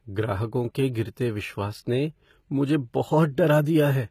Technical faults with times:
0.00-4.11 HE-AAC compression

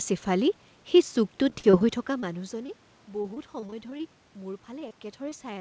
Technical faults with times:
1.50-1.82 repeated packet loss (robotic sound)
2.20-2.24 short concealed packet loss
2.66-2.70 short concealed packet loss
3.22-4.01 repeated packet loss (robotic sound)
4.79-4.94 short concealed packet loss
5.29-5.33 short concealed packet loss

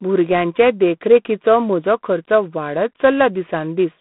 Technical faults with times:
0.00-4.00 G.726 ADPCM

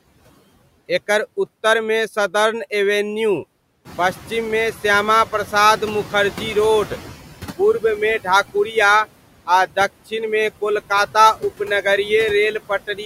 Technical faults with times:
0.00-13.05 noise suppressor artifacts
3.85-7.13 noise suppressor catching up

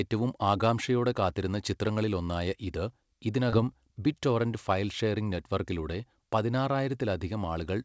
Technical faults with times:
3.50-3.55 short concealed packet loss

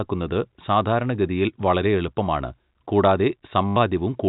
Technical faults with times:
3.68-3.76 packet loss with last packet repeated

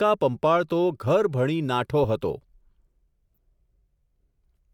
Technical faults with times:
3.36 corrupt frame decoded

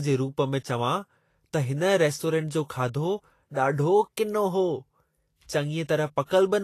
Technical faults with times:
0.00-6.64 Vorbis compression

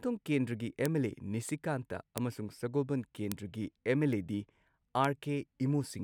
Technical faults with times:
0.85 bit error spike
2.18 bit error spike
3.32 bit error spike
4.13 bit error spike
5.05 bit error spike

